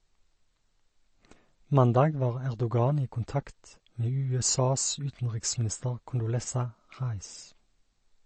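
Speech, with MP3 compression damage that is plainly audible throughout. Nothing is present above 8.3 kHz, and the weak spectral detail below that flickers in and out, giving a watery, swirly texture with chirpy s sounds and smeared consonant attacks. That flicker separates it from a simple low-pass filter, which would dull the top end but leave the remaining sound steady. The likely cause is an MP3 encode starved of bits, which fits a bitrate around 34 kbps.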